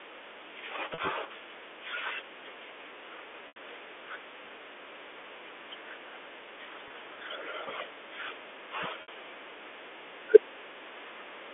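At 0.94, 3.48, 6.88 and 9.02 s the speech breaks briefly with packet loss with pitch repetition, lasting 40, 80, 20 and 60 ms, steps that fit 20 ms packets. The receiver filled each gap by looping the last pitch period. The shorter ones sound like a held, buzzy sustain, while 80 ms at 3.48 s fades toward silence before speech cross-fades back. On a spectrogram each shows frozen, evenly repeated harmonics; the waveform shows identical repeating cycles that taper. The G.711 telephone band stays within 300 Hz to 3.5 kHz throughout.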